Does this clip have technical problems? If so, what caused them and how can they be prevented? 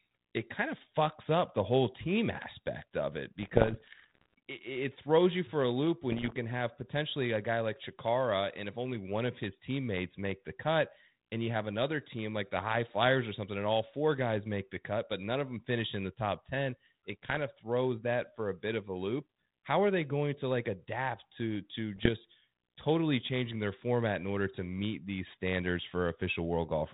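Yes. Bit errors on the ADPCM link corrupted the decoder's adaptive step and prediction, leaving ringing pops and rough bursts at 3.39–4.34 s, 6.12–6.36 s after "you for a loop", 17.23–17.38 s before "of throws that for", and 21.96–22.09 s after "like adapt to to". A cleaner radio path or error-protected transmission would prevent them.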